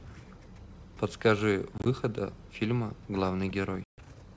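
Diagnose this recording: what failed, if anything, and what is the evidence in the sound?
Network packet loss on the ADPCM call: hard silent gaps at 1.78–1.88 s, scattered, and at 3.84–4.00 s, then slightly distorted speech as the desynchronised decoder predictor resettles.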